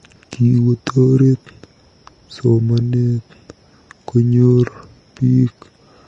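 Vorbis compression runs throughout this speech clip: nothing is heard above about 10.5 kHz, and the treble turns hissy and grainy, with roughened tones and smeared attacks. This is likely low-quality Vorbis coding, where coarsely quantised high-frequency detail becomes noise. The damage points to a low bitrate near 32 kbps.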